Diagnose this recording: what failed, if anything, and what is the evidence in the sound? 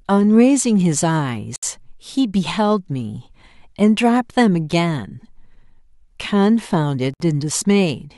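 The failure is at the codec stage: a gap at a join of encoded pieces, heard twice in the speech, from 1.56 to 1.63 s (about 68 ms) and from 7.14 to 7.20 s (about 64 ms). Each piece was encoded on its own and then butted together untrimmed, so encoder start-up delay and final-frame padding leave dead air. On a waveform each shows as a flat dropout with smeared edges; a spectrogram shows a clean vertical blank band, slightly smeared, before the speech resumes where it stopped.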